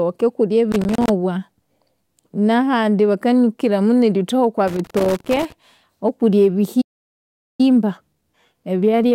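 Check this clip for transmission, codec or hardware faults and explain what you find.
There are three problems here: a connector crackle that shows up twice, a dropout in playback, and a hurried stretch right after that dropout.

The loose connector crackle comes first, from 0.72 to 1.09 s, and returns from 4.68 to 5.52 s. A contact somewhere in the chain is making and breaking as it shifts, so the signal gets chopped into fragments. Both times you hear an irregular scratchy burst riding over the speech, and the second one is longer.

The playback stall runs from 6.81 to 7.61 s. The speech just stops dead for about 0.78 s and then picks up again. That gap is likely the player running dry of buffered data, or its audio thread getting blocked, so there was nothing to send to the output until it recovered. It sounds like a hard cut to silence in mid-flow, not a fade.

The time-compressed catch-up starts at 7.61 s and lasts to the end. 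Once the stall clears, the player has a backlog to work off. It trims small slices out of the audio and cross-fades across the joins, which runs the speech at about 1.1x speed while keeping the pitch where it was. You hear the delivery as slightly rushed.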